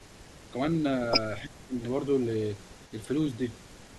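From 0.00 to 0.51 s, a very faint copy of the speech follows it 324 ms later. This echo leak likely comes from a loudspeaker whose canceller let the pickup through. From 1.45 to 1.75 s, the speech drops sharply in short pieces. This is speech suppressed in double talk, likely the canceller ducking both sides at once. The same faint 324 ms echo returns from 1.51 to 2.93 s and from 3.33 s to the end.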